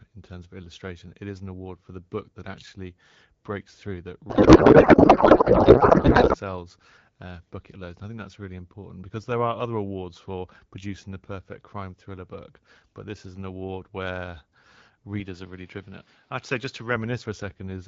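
From 4.30 to 6.36 s, just after "actually breaks through that", a codec payload misread replaces the speech with garbled noise and warble. The AMR frames were packed octet-aligned but read as bandwidth-efficient, so every field landed in the wrong place. A spectrogram shows smeared, formless energy with no harmonic striations.

From 15.20 to 16.96 s the sound turns dull and boxy, the likely result of the input being switched to a poorer device. The spectrogram shows a hard ceiling near 5.9 kHz and a new noise floor about 30 dB under the signal. The waveform shows no gap and no level jump at the switch.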